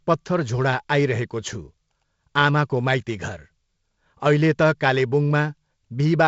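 Nothing stood out on listening to this speech, which comes through G.722 wideband telephone coding at 48 kbit/s with nothing above 7.7 kHz.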